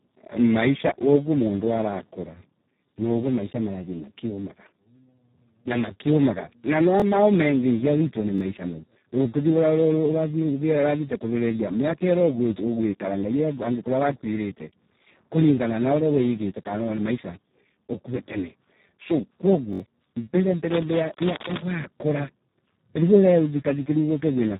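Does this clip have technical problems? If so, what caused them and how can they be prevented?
Yes. Speex codec throughout: heavy low-bitrate coding, around 4 kbps, leaves speech hoarse and robotic, with nothing above 3.8 kHz. Prevent by using a higher bitrate or a modern codec.

Repeated buffer at 7.00 s, 8.38 s just after "witwe ni", and 19.73 to 19.80 s: late audio made the device replay its last 21 ms block, once, once, then three times, which points to a 1024-sample buffer. Prevent with larger buffers or lower system load.

Cable scratch noise from 20.68 to 21.62 s: dense, uneven rustling roughly 5 dB below the speech, likely from a worn cable or connector being moved. Prevent by replacing or securing the cable.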